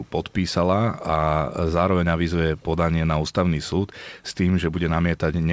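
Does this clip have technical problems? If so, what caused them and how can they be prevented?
Yes. At 3.71 to 3.75 s a faint copy of the speech returns 368 ms late, likely an echo leak: a distinct delayed repeat, unlike reverb's smooth decaying tail. Headphones or a more effective echo canceller at the loudspeaker end would stop the played-back sound from being sent back.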